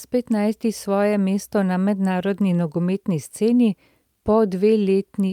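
Nothing to flag here: the speech runs its whole length without a single technical fault turning up anywhere along the way.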